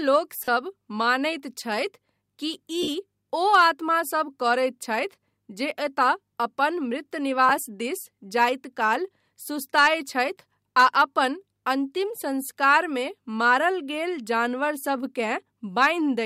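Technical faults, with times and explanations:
0.44–0.48 s, 2.82–2.88 s and 7.49 s, lost LE Audio frames: short dropouts of about 38, 53 and 15 ms, which fits 7.5 ms frames, where the decoder patches in the last spectrum with random signs, so the sound briefly smears into noise.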